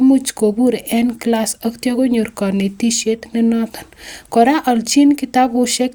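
Nothing goes wrong anywhere in this bit of speech; there's simply no technical fault to point to.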